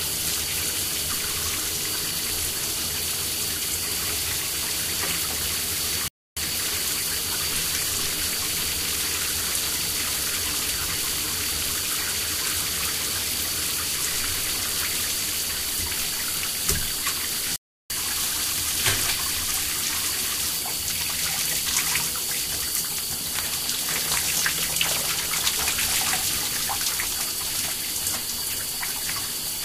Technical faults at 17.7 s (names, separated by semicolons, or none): playback stall